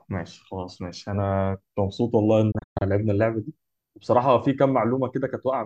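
Speech cuts out in a brief stutter of silent holes between 2.51 and 2.82 s, with the longest gap lasting 120 ms and about 192 ms of sound missing across that 288 ms stretch, each hole fading in roughly 8 ms. This is a digital broadcast dropout: the receiver lost the signal or rejected corrupted frames and muted until clean ones returned, so the audio sent during those gaps is gone.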